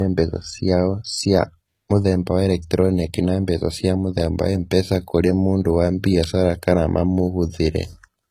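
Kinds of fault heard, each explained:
Low-bitrate audio saved at a high bitrate: throughout the speech, nothing is present above about 14.9 kHz, and the coarse, smeared detail of heavy data reduction remains audible despite the file's generous size. The likely cause is audio first squeezed through a very low-bitrate codec, with the sound pointing to something like HE-AAC near 20 kbit/s, then re-encoded as MP3 at around 192 kbit/s. That second pass keeps the earlier damage intact and cannot restore the discarded content.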